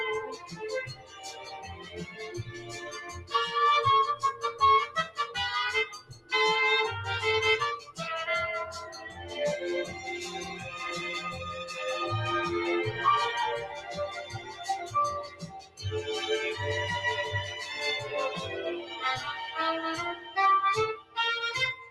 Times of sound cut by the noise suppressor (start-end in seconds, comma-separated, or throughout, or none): 0.32-3.33, 4.33-6.32, 7.79-7.99, 8.91-9.32, 13.75-15.82, 18.82-18.99, 20.15-21.90